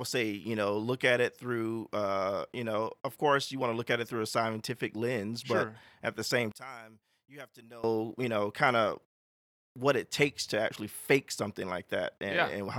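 From 6.52 s to 7.84 s, just after "sure at the same", the speech drops by about 21 dB and stays down until "you know kind of". The sound does not fade. It simply collapses and then returns. The likely cause is one channel inverted. One stereo channel had its polarity flipped. When the two channels were summed to mono, the sound they shared cancelled. Only the small difference between them remained audible.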